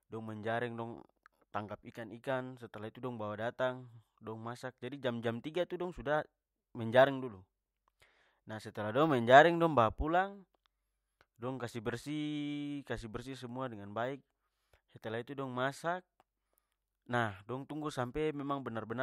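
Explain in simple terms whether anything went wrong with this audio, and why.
Nothing went wrong with this speech recording, because no technical faults can be heard anywhere in it. At no moment does the sound change in a way that would point to a problem with how it was recorded or passed along.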